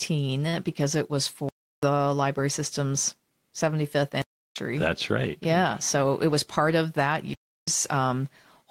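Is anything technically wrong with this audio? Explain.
Yes, the speech has two kinds of fault.

Block of digital silence, at 1.49–1.83 s (after "because it was", before "library system's"), 4.22–4.56 s, and 7.33–7.68 s (after "of that"): likely because the output buffer went unfilled, about 341 ms of samples became zeros each time, which fits a 16384-sample buffer. The sound drops abruptly into dead silence and returns.

Jitter buffer speed-up, from 5.95 to 6.60 s, just before "of that": with excess audio queued, the receiver trimmed short pitch-period pieces, a few tens of milliseconds in total, so the sound runs about 105% fast at unchanged pitch and feels slightly hurried.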